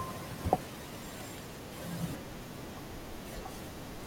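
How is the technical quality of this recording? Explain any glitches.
One glitch affects this speech recording. From 2.60 to 2.65 s, there are chunks out of order. A block of about 23 ms plays one chunk late, after the audio meant to follow it. Nothing is missing. The reordering leaves three hard joins, heard as a brief jumbled stutter.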